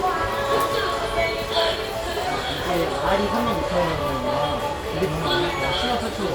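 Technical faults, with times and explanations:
2.27 s, skip ahead: roughly 0.3 s of audio was discarded, either in transit or by an overflowing jitter buffer that already held later audio. Playback jumps forward with no gap, so the sound before and after the missing stretch is joined abruptly.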